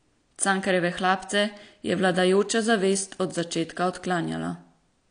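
Throughout, the speech sounds dull and smeared with nothing above 9.8 kHz, likely AAC compression at a low bitrate, something like 32 kbps.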